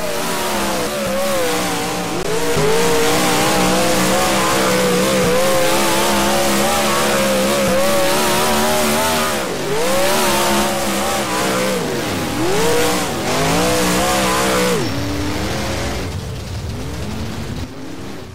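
A block of digital silence lands at 2.23 s, where about 15 ms of the signal drops straight to silence. Samples that should have been there were replaced by zeros, most likely because the output buffer was not filled in time. With no fade in or out, the waveform jumps to silence and back abruptly. At this length the gap is heard as a brief tick or dip rather than as silence.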